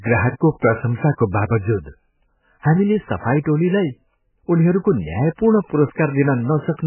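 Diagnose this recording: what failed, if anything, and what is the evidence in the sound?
The codec stage failed, most likely from MP3 compression. Throughout the speech nothing survives above 3 kHz, and the heavy, watery swirl points to a very low bitrate, around 8 kbps. Weak frequency lines flicker frame to frame, which a plain low-pass or narrowband phone line would not cause.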